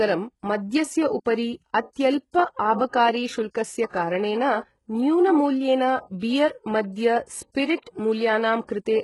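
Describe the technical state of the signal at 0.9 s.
At 0.9 s the speech carries the same HE-AAC compression damage heard across the whole clip: treble above about 11.5 kHz is gone, and what remains up top sounds rebuilt from lower bands, so s sounds come out gritty and lispy. The heavy damage likely points to a very low bitrate, around 12 kbps.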